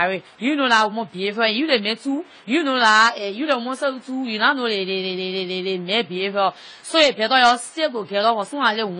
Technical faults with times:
0.00-8.99 AAC compression

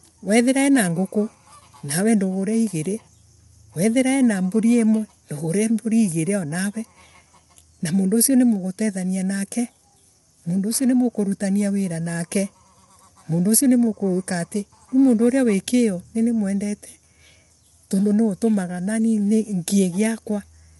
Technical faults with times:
0.00-20.79 low-delay AAC compression

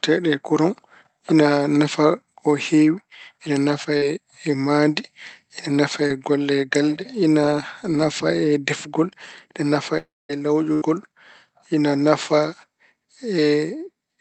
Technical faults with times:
3.97-4.03 short concealed packet loss
6.07-6.12 short concealed packet loss
9.98-10.31 long network dropout
10.73-10.83 burst of packet loss

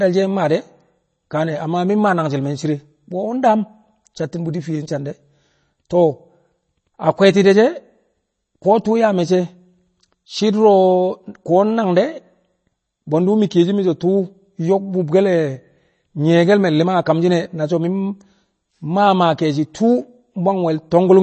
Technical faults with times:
0.00-21.23 MP3 compression

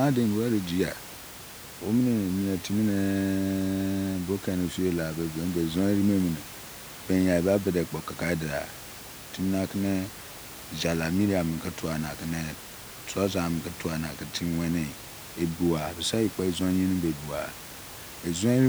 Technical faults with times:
none

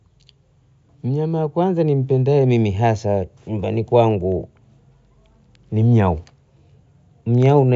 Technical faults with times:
none

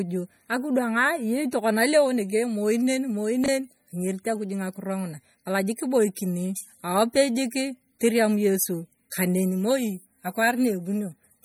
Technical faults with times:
0.00-11.45 MP3 compression
3.44-3.48 chunks out of order

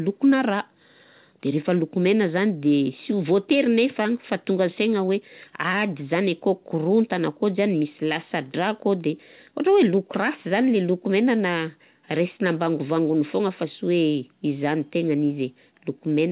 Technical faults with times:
none

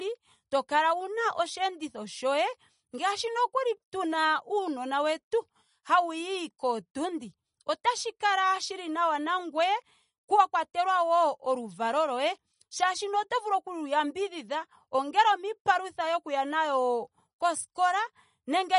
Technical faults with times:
0.00-18.79 MP3 compression

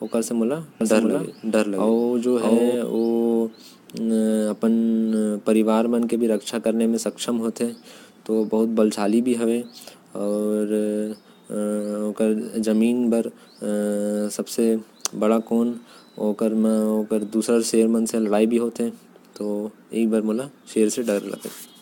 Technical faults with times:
0.00-21.82 generation loss
0.81-2.75 doubled audio track

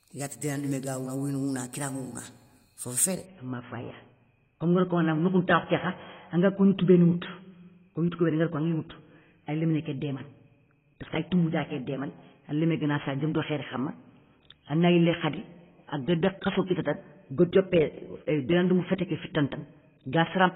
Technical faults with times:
3.26-20.55 adaptive stream at a lower bitrate

